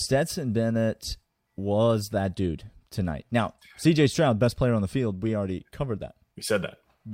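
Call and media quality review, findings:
No findings for this call and media quality review.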